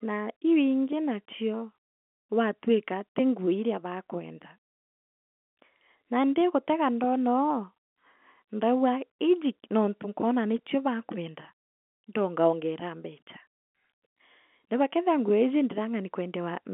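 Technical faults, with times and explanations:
No faults turn up here; the speech sits in ordinary G.711 telephone coding, the usual narrow phone band with nothing above it.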